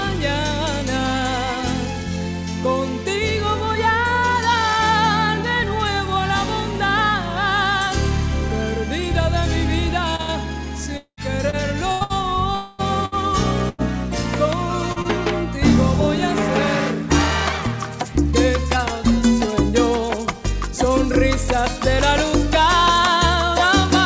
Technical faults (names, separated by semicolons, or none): repeated packet loss (robotic sound); long network dropout; short concealed packet loss